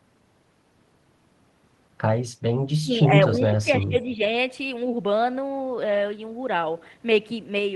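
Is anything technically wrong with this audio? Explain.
Yes. The speech dips sharply from 2.75 to 2.92 s, by roughly 25 dB, and again from 3.29 to 4.21 s, by about 20 dB, patchily. This is likely speech suppressed in double talk. The echo canceller, unable to separate this talker from echo, attenuated both.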